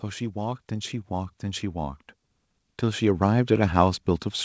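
From 0.05 to 2.06 s, automatic gain rising lifts the level by about 7 dB as the gain control decides the input is too quiet. Speech and background noise swell together over two seconds, unlike a sudden gain step or compressor pumping that tracks each syllable.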